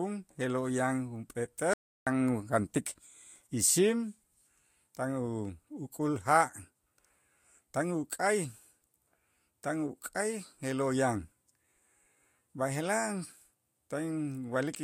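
At 1.73 s an audio dropout to silence cuts the speech for 0.33 s, until 2.07 s, likely from lost input; waveform flatlines, spectrogram goes blank.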